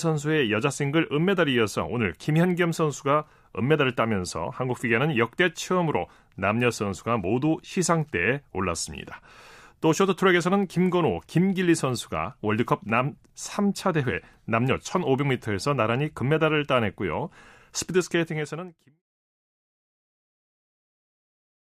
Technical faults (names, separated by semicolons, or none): none